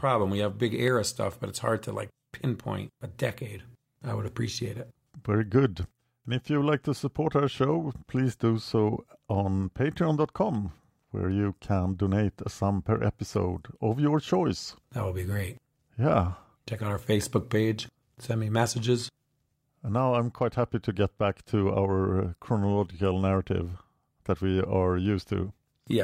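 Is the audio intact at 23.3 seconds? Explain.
No, 23.3 s falls inside a run of clock drift buffer slips that goes from about 0.88 s to 25.06 s. You get a regular click every 1.21 s or so while the speech is running, about twenty of them in all. The likely cause is two devices on separate clocks disagreeing by something like 150 ppm. The buffer between them creeps until a handful of samples, maybe seven, gets dropped or repeated, and each of those jumps is a click.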